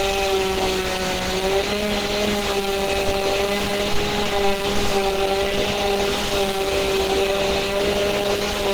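Throughout, the sound is hoarse, grainy and muffled, plainly audible Opus compression damage likely from hybrid-mode encoding at a bitrate around 16 kbps.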